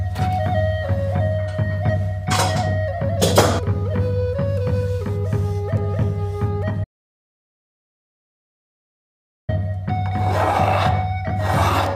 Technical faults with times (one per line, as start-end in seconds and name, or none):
6.84-9.49 audio dropout to silence